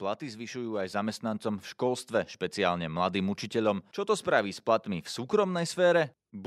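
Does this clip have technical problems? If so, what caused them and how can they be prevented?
Yes, there's automatic gain rising from 0.19 to 2.13 s: the AGC decided the speech was too quiet and slowly pushed level up about 7 dB, lifting the background with it. Setting a proper fixed input gain and switching off AGC prevents it.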